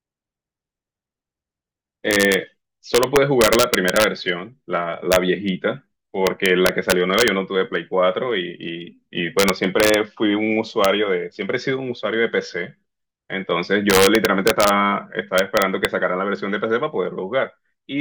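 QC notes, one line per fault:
2.11–2.34 s, integer overflow: sharp cracks on the loudest peaks, overdriven by about 1 dB, where samples past full scale wrap to the opposite sign instead of limiting.
2.95–4.04 s, integer overflow: a longer run of violent snapping, peaks about 3 dB over the limit flipping across the whole range, harsher than ordinary clipping.
5.12–5.16 s, integer overflow: brief cracking as peaks about 1 dB too hot wrap from full positive to full negative.
6.27–7.28 s, integer overflow: repeated cracks through this stretch, loud passages about 1 dB over full scale wrapping around rather than being held at the ceiling.
9.39–9.94 s, integer overflow: intermittent sharp snaps on peaks about 1 dB too loud, each overshoot flipping sign across the full range.
10.85 s, integer overflow: brief cracking where peaks sitting right at the limit wrapped to the opposite extreme.
13.90–14.69 s, integer overflow: strong cracking on peaks about 2 dB over full scale, the sum wrapping around instead of saturating.
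15.38–15.85 s, integer overflow: violent cracks as peaks about 2 dB past the integer limit flip sign across the whole range.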